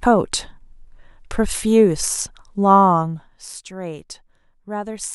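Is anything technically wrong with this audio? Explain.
Yes. Zipper noise runs from 2.90 to 3.66 s in this speech. The level falls by roughly 15 dB in coarse, unsmoothed steps, around fifty a second, and each jump leaves a small click, so a fast ticking buzz rides on the voice through the drop.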